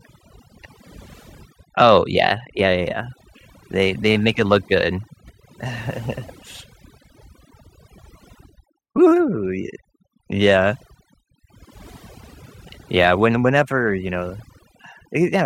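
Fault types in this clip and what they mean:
overdone noise removal: A noise reduction stage was set too aggressively, cutting individual frequency bands whenever they sat near its noise estimate. Throughout this speech, the gaps sink to near silence flecked with twinkling specks, and the voice loses its quieter detail as it is stripped away.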